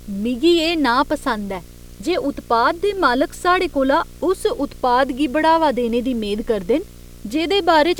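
Video or display buzz runs throughout: a screen or video cable couples its 60 Hz field-rate pulses into the audio, leaving a hashy buzz some 25 dB beneath the speech.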